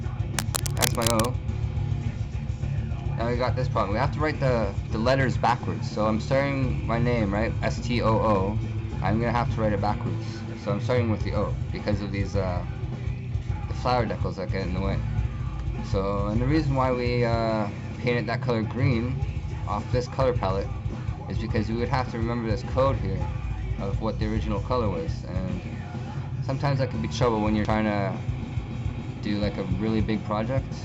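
Cable scratch noise runs from 0.33 s to 1.36 s, near the start of the audio: a dense, uneven burst of scratching and rustling laid over the sound, loud enough to sit only a few decibels below the signal itself. The likely cause is a worn cable, connector or control being moved, so that its contact resistance jumps about rapidly for that second or so and injects irregular noise into the signal path.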